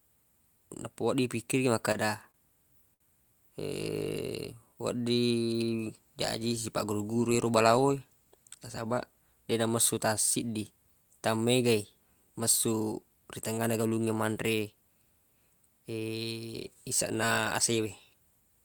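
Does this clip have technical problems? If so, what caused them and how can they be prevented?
Yes. Between 1.85 and 3.02 s, packets kept arriving late, so the jitter buffer ran dry six times. Each time, the receiver stretched the last sound to bridge the wait, filling 135 ms in all, with the longest gap 65 ms. Nothing is lost, but about 12% of that stretch is filler, so the speech stutters and drags in repeated stalls. Steadier network delivery, for example by prioritising voice traffic, would prevent this.

From 4.05 to 5.51 s, the jitter buffer slow-down shows the buffer running short and topping itself up. The receiver repeated single pitch cycles and bits of pauses again and again, adding 140 ms. Playback drops to 91% speed while the pitch stays put, so syllables sound drawn out. Starting with a slightly larger buffer target avoids these emergency refills.

Between 7.46 and 8.57 s, the buffer held more audio than it aims for, likely after a burst of delayed packets arrived together. 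This is a jitter buffer speed-up: the receiver cut out short pieces one or a few pitch periods long, removing about 150 ms. The speech runs at 111% speed at unchanged pitch and sounds hurried. Reducing bursty packet delivery on the network path would prevent it.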